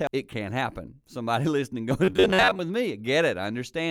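At 0.07 s, damaged data in the compressed stream gives a brief glitch as the decoder loses sync. From 2.05 to 2.59 s, a rigid metallic buzz at a fixed 94 Hz, steadier than any warble, is robotic sound likely from repeated short buffers of about 11 ms.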